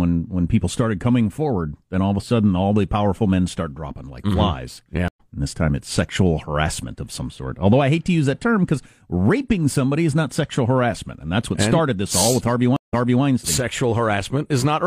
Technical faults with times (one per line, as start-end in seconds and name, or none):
5.08-5.20 stream reconnect
12.76-13.24 stream reconnect